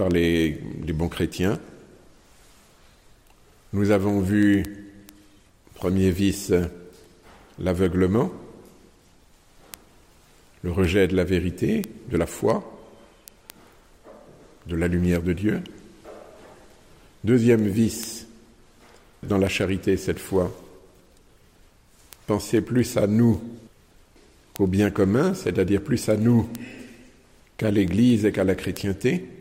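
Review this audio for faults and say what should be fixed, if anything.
A steady stream of sharp, uneven ticks, about ten per second, runs from 0.11 s to 29.32 s. These are word clock ticks: the receiver free-runs against the sender's clock, roughly 200 ppm apart, so single samples are dropped or repeated at each slip. To prevent it, lock the receiving device to the incoming digital signal or to a shared master word clock.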